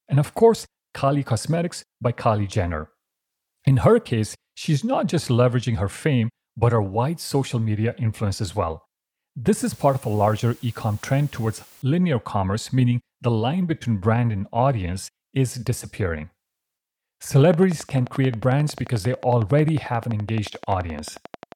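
From 9.57 to 11.82 s, just as "linear commerce meaning the" begins, the speech drops to low bit depth with dither. At 8 bits, dithered rounding turns the error into a steady, even hiss about 30 dB below the signal. A spectrogram shows a flat, broadband noise floor filling every frequency, and the waveform's quiet stretches thicken into fuzz.

From 17.45 s to 21.53 s, a train of clicks ticks regularly at 11.3 per second, around fifty in all, peaking about 5 dB above the speech and continuing through pauses. The likely cause is interference or a faulty connection or power supply. They appear as evenly spaced vertical lines on a spectrogram and sharp spikes on the waveform.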